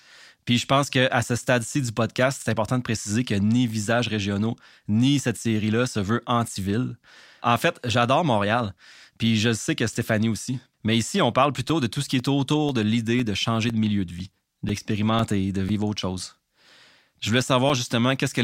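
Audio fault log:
11.69 to 18.20 s, periodic USB or driver dropouts: every 0.5 s a few milliseconds of the speech drop to silence, roughly fifteen times, as something likely stalls the USB bus or audio driver on a fixed schedule, leaving evenly spaced ticks heard only while the voice sounds.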